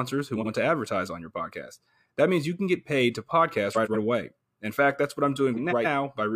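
A speech clip with short garbled flutters at 0.36–0.47 s, 3.73–3.96 s and 5.56–5.86 s. These come from frames out of order: neighbouring blocks of about 46, 93 and 139 ms were swapped, with no time lost.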